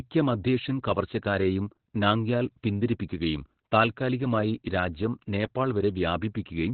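Throughout, the speech carries heavy Opus voice compression. Nothing survives above 4.3 kHz. It sounds muffled, hoarse and slightly robotic, which fits SILK narrowband coding near 8 kbps.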